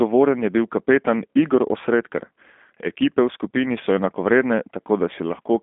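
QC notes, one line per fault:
throughout G.729 codec: speech is rebuilt from a vocal tract filter and sparse pulses, so it sounds rough and synthetic, as fits an 8 kbit/s G.729A coder. A spectrogram shows energy held between 200 Hz and 3.5 kHz, with smeared harmonics.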